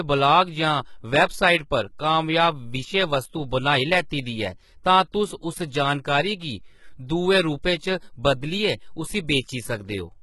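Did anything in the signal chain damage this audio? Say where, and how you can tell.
Yes, at the codec stage: the speech has gritty, lispy s sounds throughout, and a spectrogram shows smeared, copied-looking treble cut off at 11.8 kHz. This is likely HE-AAC compression at a very low bitrate, around 16 kbps, which rebuilds the top band by replicating lower frequencies.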